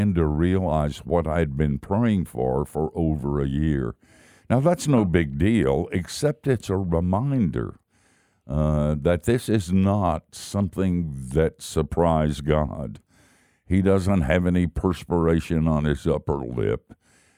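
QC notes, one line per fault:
Nothing to flag here; the speech comes through without any technical problems worth noting.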